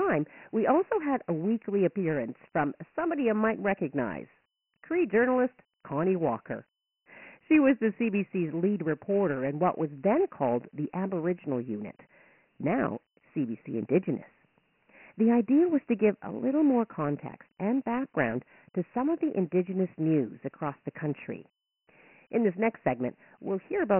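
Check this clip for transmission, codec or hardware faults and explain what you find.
The whole clip carries Dialogic VOX ADPCM damage. The speech is coded at 4 bits per sample, which fits a 6,000-sample rate, so nothing survives above 3 kHz. Heavy quantisation leaves a gritty hiss trailing each syllable. A spectrogram shows a hard ceiling at 3 kHz and grainy noise between words.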